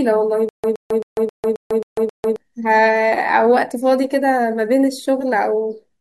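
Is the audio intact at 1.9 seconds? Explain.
No. From 0.49 to 2.36 s a 120 ms burst of speech repeats seven times, every 267 ms, separated by 147 ms of dead silence. This stutter with silent gaps is likely a stalled stream replaying its last fragment on each retry, so the original speech from that span is lost.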